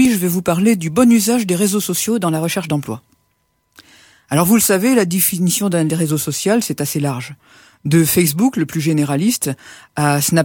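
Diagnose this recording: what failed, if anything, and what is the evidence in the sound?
Twice the sound runs fast and sharp for a moment, from 2.02 to 2.73 s and again from 5.50 to 6.10 s, with speed up 6.12% and pitch raised 103 cents, about a semitone, before snapping back. This points to the driver or buffer stage, likely a drift correction step, where clock-matching software briefly raises the playback rate to drain its buffer. On a spectrogram, every harmonic line jumps upward together for those spans. In the waveform, the affected stretches look slightly compressed in time.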